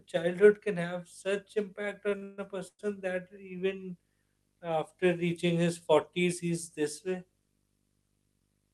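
A speech recording with video or display buzz throughout. A steady 50 Hz buzz sits under the voice, with hash above it and a thin high whine at 15.6 kHz. The buzz level is roughly 40 dB below the speech. The 50 Hz part matches a picture field rate, and the whine matches a video line rate. This points to a screen or video cable coupling into the audio. Repeated stalls (stutter) occur from 2.09 to 2.81 s. The speech hangs four times there. Each hang holds the last sound before moving on. The longest lasts 142 ms. About 315 ms of that span is filled in this way, close to half of it. Nothing is lost, but the speech drags and judders. Packets arrived late, so the jitter buffer ran empty again and again.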